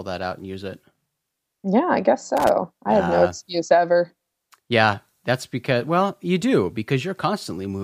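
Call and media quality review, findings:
Loose connector crackle, 2.37–2.49 s, about 0.13 s burst of irregular scratching just before "I have uh no". Probable component: worn or dirty cable contact or jack. Mechanism: intermittent make-and-break chops the signal, and any DC on the line adds pops. Check connectors and strain relief.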